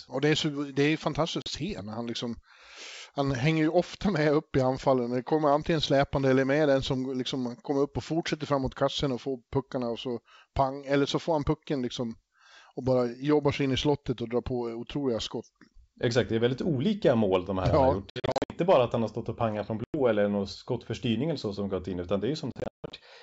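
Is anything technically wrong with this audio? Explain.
Yes: packet loss on an ADPCM call. Silent holes appear at 1.42 s after "så det är fantastiskt" (40 ms), 18.10–18.56 s before "bara att han har" (260 ms scattered), 19.84–19.95 s (100 ms) and 22.52–22.93 s after "som gått in utan" (280 ms scattered). The receiver's adaptive predictor loses track of the sender's, so the sound resumes with brief distortion.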